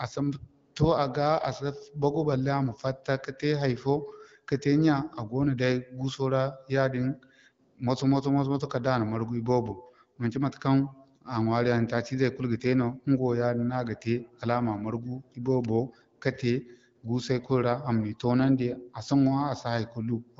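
Nothing goes wrong anywhere in this speech; it's just the usual AMR wideband (HD Voice) codec at 12.65 kbit/s doing its job, with the top end topping out around 7.5 kHz as you'd expect from that path.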